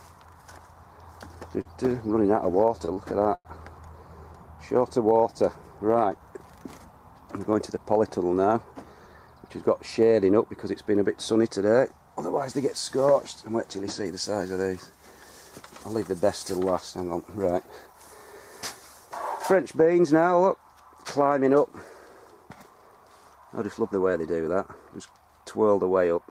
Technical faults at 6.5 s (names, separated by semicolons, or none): none